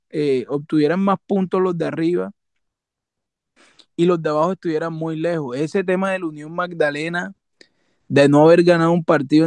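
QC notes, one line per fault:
Nothing to flag here; the speech comes through without any technical faults.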